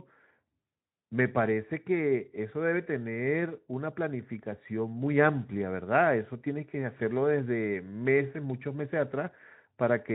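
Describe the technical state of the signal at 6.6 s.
At 6.6 s the speech is intact, with no fault at that moment, just the light Speex coding that runs through the clip.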